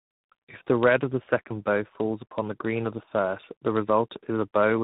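Rough, muffled, warbly speech from start to finish, with nothing above about 3.8 kHz. This is tandem speech coding: the sound points to two speech coders in a row, fitting G.729A then G.726 across a G.711 link, each re-coding the previous one's degraded output.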